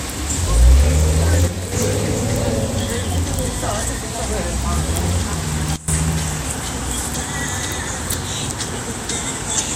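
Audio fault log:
1.48–1.72 s and 5.76–5.88 s, sudden gain jump: the everyday sound and its background noise drop together, by about 6 dB for 0.24 s and then by about 19 dB for 0.12 s, with level returning abruptly each time. The likely cause is a gain setting applied between one sample and the next with no ramp. On a waveform the envelope steps down and back up with vertical edges. A spectrogram shows the whole band dimming at once.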